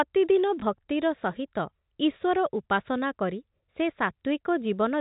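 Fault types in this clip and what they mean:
Packet loss with last packet repeated: one 20 ms stretch at 0.6 s went missing and the previous packet was replayed in its place, giving a small blip. A waveform shows an exact copy of the preceding 20 ms with a small discontinuity at each edge.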